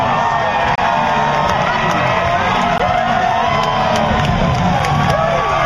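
Hard-edged silent holes cut the sound at 0.75 to 0.78 s, 2.78 s and 4.80 s. This is a gap between stream segments: timestamps on the 2 s segments leave 26, 16 and 6 ms gaps, filled with silence.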